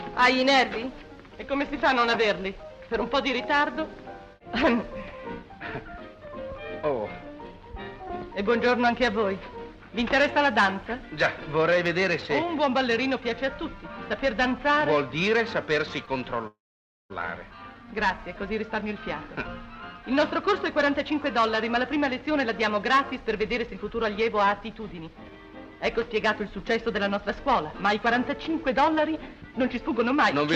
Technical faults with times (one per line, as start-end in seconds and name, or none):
16.05-16.09 short stall from a late packet
16.47-17.12 call audio freeze
20.06-25.31 jitter buffer speed-up
26.57-30.42 jitter buffer speed-up